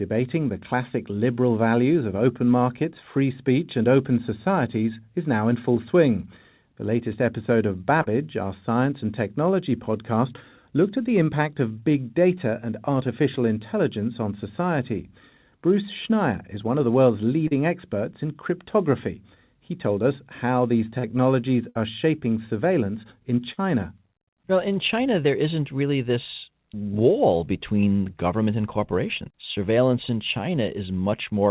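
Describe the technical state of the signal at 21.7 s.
A burst of packet loss runs from 21.69 to 21.77 s. Packets were lost in transit, so the receiver stretched the last sound for about 57 ms while fading it down, and about 60 ms of audio is missing when the narrowband, 4 kHz-limited speech resumes.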